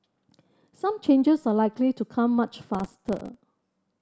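From 2.75 to 3.44 s the speech is torn by processor overload crackle. The processor fell behind and missed dozens of deadlines in a row. Each miss drops a tiny slice to silence, which fits buffers of roughly 2 ms. The hard-edged gaps merge into gritty crackling.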